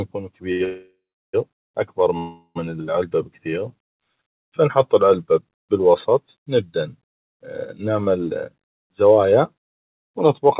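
A short stall from a late packet at 0.52 to 0.62 s holds the sound about 77 ms too long while the jitter buffer waits, with a faint buzz or dip and nothing lost.

Call audio freezes follow at 0.64 to 1.35 s and 2.17 to 2.57 s, likely from packets held up in transit. Each time, the last sound continues as a fading buzz or hiss, going silent for about 360 ms in the first freeze and about 50 ms in the second. The audio then resumes where it stopped, inserting gaps of 696 ms and 380 ms.

A jitter buffer speed-up runs from 8.85 to 10.42 s. Short pitch-period slices are repeatedly trimmed, removing about a tenth of a second, so the speech runs at 106% speed and sounds hurried at unchanged pitch. All of this comes through a narrowband call path with nothing above 4 kHz.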